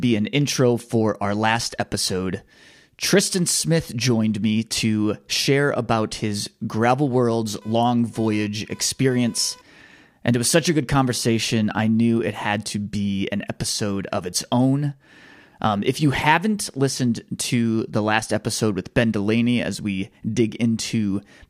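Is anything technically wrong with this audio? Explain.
Yes. From 7.61 to 9.61 s there is computer activity noise, a chirping buzz pulsing at roughly 500 Hz, about 30 dB below the speech. Processor load shifts the shared ground. Unlike steady mains hum, it starts and stops with computer activity, unrelated to the speech.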